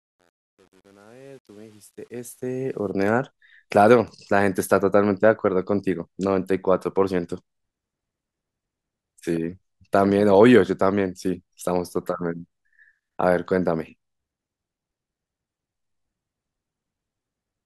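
Truncation distortion on a fade affects the opening of this speech clip, from 0.0 to 2.91 s, during the fade-in. It is harshest from 0.0 to 2.34 s. The gain stage drops the low-order bits without dither, which fits a stage keeping 9 bits. The quietest part of the rising fade therefore collapses into coarse square steps, and the start sounds gritty before the level grows enough to mask the steps.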